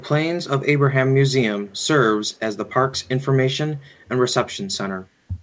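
A faint, delayed copy of the speech trails behind it at 1.65–1.87 s, 2.26–2.39 s, 2.97–3.08 s and 3.78–4.06 s, lagging about 178 ms and sitting very far below the direct sound. This is echo leak, likely from a far-end echo canceller letting loudspeaker pickup back into the call.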